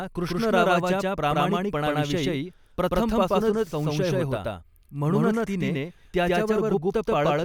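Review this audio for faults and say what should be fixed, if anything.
There's a doubled audio track running through the whole clip: every bit of speech comes back a second time, around 150 ms later and at about the same level as the original. The repeat is full-band and dry, with no decay or room colour, so it isn't a reflection. It's likely the same signal reaching the mix twice, once directly and once through a slower monitoring or processing path. To prevent it, check routing so each source feeds the recording only once.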